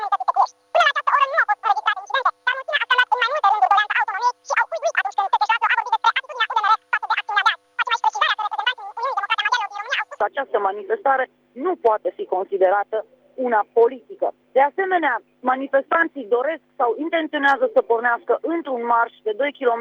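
From the start to 10.21 s, the audio is read two samples at a time, giving double speed. The reader treats each pair of samples as one frame. Everything plays at twice the rate and an octave higher.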